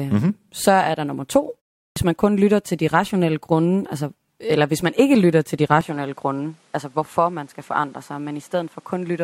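At 1.92 to 1.96 s, a clipped start after a pause: the output device was still waking after a 0.39 s silence, swallowing about 44 ms before "man kun lytter til". From 5.81 s to the end, after "ikke lytter til de", the sound abruptly dulls, with nothing above 12.4 kHz, a level drop of roughly 5 dB and new noise about 35 dB down, likely an input switched to a poorer device.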